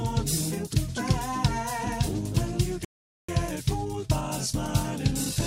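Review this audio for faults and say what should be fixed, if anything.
At 2.85 s the sound cuts to silence for about 440 ms until 3.29 s, then resumes. This playback stall is likely from the player starving for data or a blocked thread.

From 3.29 s to the end the audio runs hurried at normal pitch. This is time-compressed catch-up at 1.1x, where small cross-faded slices are dropped to clear the backlog.

Preventing both means keeping a larger playback buffer and running the audio thread at high priority so it never starves.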